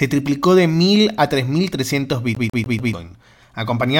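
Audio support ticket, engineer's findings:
CD stuck on one turn, 2.35 to 2.93 s. Speech locks into a fast, even stutter: one 146 ms slice replays four times, with a brief mute at each restart. Probable component: disc surface or optical pickup. A scratch knocks the laser back one track at the same point on every rotation, so the same fragment repeats before tracking recovers.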